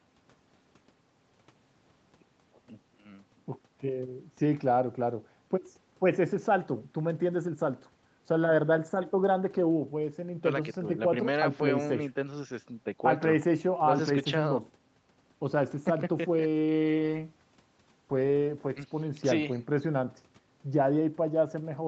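Nothing stood out on listening to this speech recording, which has the limited top end of a call link, with nothing above about 8 kHz.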